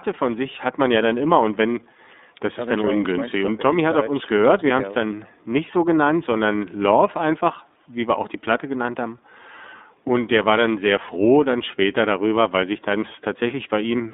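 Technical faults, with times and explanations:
Throughout, iLBC codec: the speech is squeezed into a narrow telephone band of about 200 Hz to 3.7 kHz, so it sounds thin and boxed. Each 30 ms frame is coded on its own, which fits about 13.3 kbps. The rough, synthetic texture is plainly audible.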